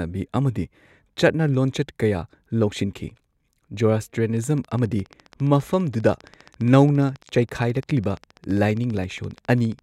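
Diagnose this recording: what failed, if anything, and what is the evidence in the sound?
Likely interference pickup in the analogue wiring: a regular train of clicks, 14.8 per second, ticks from 4.37 s to 9.80 s, roughly as loud as the speech.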